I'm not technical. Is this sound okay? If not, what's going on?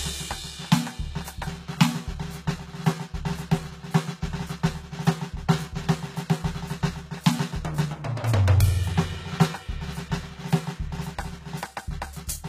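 No, not quite. All the way through this music, the top end sounds bright but plainly fake, with cymbals and hissy sounds coming out gritty or metallic, and nothing at all above about 14.9 kHz. That points to HE-AAC compression, likely at a low setting. It keeps only the lower part of the sound properly and makes up the sparkle by copying lower pitches upward, so the treble doesn't quite match the real instruments.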